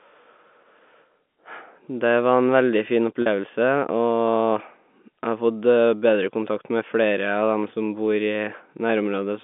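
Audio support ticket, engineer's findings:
Packet loss with pitch repetition, 3.22 to 3.26 s. A 40 ms gap, which fits two lost 20 ms packets. The receiver's concealment repeats the last pitch period, giving a brief held, buzzy tone in the speech. Probable component: network path ahead of the G.711 decoder, whose 200 Hz to 3.5 kHz telephone band is audible throughout.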